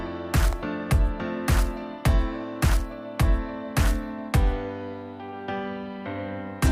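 At 0.53 s there is a single sharp snap, peaking at about -20 dBFS. This electrical switching spike was likely a nearby switch arcing into the audio line.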